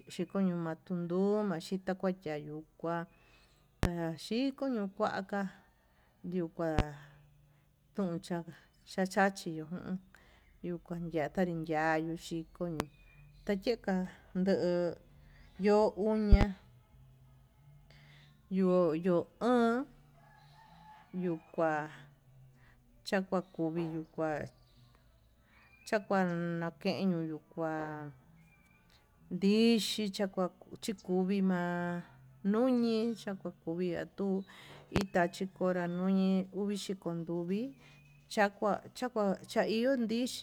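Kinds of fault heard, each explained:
Loud pop: sharp pops jump out roughly 20 dB above the speech while the talking continues underneath. Single pops land at 3.83–3.87, 6.79–6.82 and 12.80–12.84 s, and double pops at 16.32–16.45 s and 34.96–35.05 s, the last just before "tachikora nuñi". Each is likely a sudden voltage step or spike, from a plug, switch or static discharge, entering the signal path and being briefly shaped by the circuitry after it.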